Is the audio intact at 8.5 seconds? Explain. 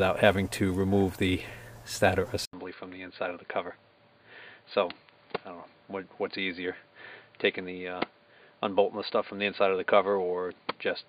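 No. At 8.5 seconds the sound sits inside a stretch running from 2.45 s to the end of the clip in which the input has switched to a poorer device, likely a second microphone or a headset's call profile. After an 80 ms gap at the switch, nothing passes above 4.7 kHz, so the sound turns dull and boxy. The level drops by roughly 5 dB, and a new noise floor sits around 50 dB below the signal.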